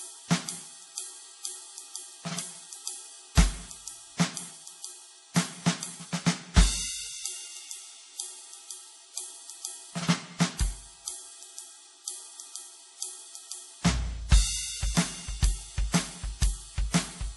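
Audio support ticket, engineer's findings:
Music, whole clip. Dull top, nothing above 11.5 kHz. Two layers of coding artefacts heard together: earlier artefacts plus the later codec's own. Likely transcoding between lossy codecs. Fits a low-rate MP3 pass re-encoded to Vorbis, stacking both codecs' damage.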